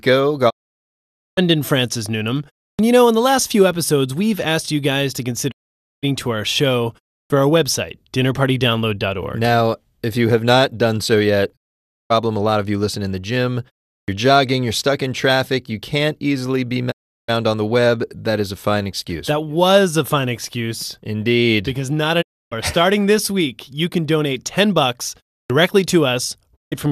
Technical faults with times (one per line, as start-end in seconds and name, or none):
0.49-1.39 digital broadcast dropout
2.75-2.79 clipped start after a pause
5.50-6.05 digital broadcast dropout
7.26-7.30 clipped start after a pause
11.55-12.12 digital broadcast dropout
14.04-14.08 clipped start after a pause
16.90-17.30 digital broadcast dropout
22.21-22.53 digital broadcast dropout
25.46-25.50 clipped start after a pause
26.55-26.73 digital broadcast dropout